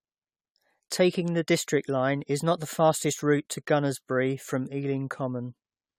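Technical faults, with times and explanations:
Throughout: generation loss. The speech has a swirly, smeared, hollow quality, consonant attacks are blurred, and nothing is present above 18.3 kHz. This is likely from around seven successive AAC-LC encodes at a rate that fits 96 kbit/s. Each re-encode quantises the audio again on a shifted frame grid, so noise and spectral holes build up. A single encode at that rate would sound far cleaner, which is what separates this from plain low-bitrate compression.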